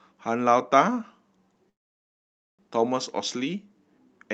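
At 1.69 s the speech halts and an almost silent gap runs to 2.62 s. This is a call audio freeze, likely from delayed packets draining the jitter buffer. Unlike a dropout, nothing is lost: speech resumes exactly where it stopped, about 0.9 s late.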